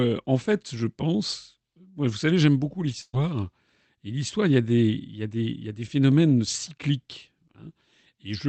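Right after "vous savez j'aime beaucoup", from 3.01 to 3.16 s, there's a burst of packet loss. Packets went missing, and the receiver filled roughly 118 ms by stretching the last bit of sound and fading it down, ending in about 30 ms of silence before the audio picks up again. When it resumes, about 120 ms of the speech is simply gone. The Opus call path adds its usual coding noise, with nothing above 8 kHz.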